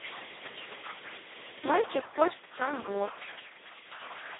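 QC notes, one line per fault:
Throughout: Speex codec. Speech through Speex at about 2.1 kbps, near the bottom of what the codec allows. With so few bits left for the excitation, the CELP model can only roughly rebuild the voicing, so the speech comes out hoarse, buzzy and robotic, close to vocoder sound. The band sits between about 250 Hz and 3.6 kHz, with nothing above 3.8 kHz, giving a narrow, telephone-like result.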